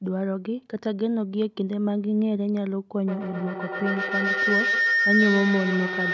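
At 3.08 s a feedback howl begins and runs to the end. Two devices share the call and room, so each microphone-to-loudspeaker loop comes back louder. The repeats narrow to a tone around 2 kHz. The loop repeats about every 150 ms, and the howl peaks about 1 dB above the speech.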